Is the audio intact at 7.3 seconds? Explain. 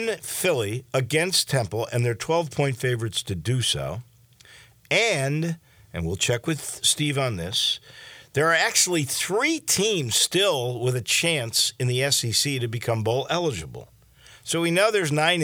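Yes, the speech plays through intact at 7.3 seconds, with no dropout, click or other break at that point.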